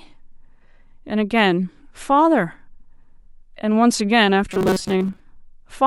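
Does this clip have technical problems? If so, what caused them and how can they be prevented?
Yes. From 4.49 to 5.20 s the speech becomes a rigid 188 Hz metallic buzz, which is robotic sound from repeated short buffers. It was likely caused by audio arriving too seldom, so a slice of about 5.3 ms keeps repeating while most real audio is skipped. Unlike dropouts, there is no silence, only a fixed pitch that loosely follows the words. A larger playback buffer, or a delivery path that always supplies fresh audio on time, would prevent it.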